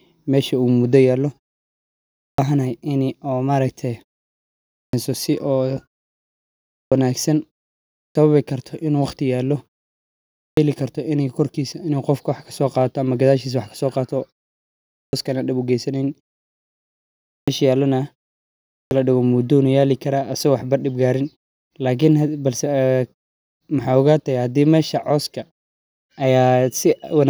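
At 1.98, 4.52, 6.55, 7.75, 10.2, 14.72, 17.08 and 18.52 s you get a clipped start after a pause. After each short silence the output device takes roughly 0.37 to 0.41 s to wake back up, so the speech snaps in abruptly with its opening sounds missing.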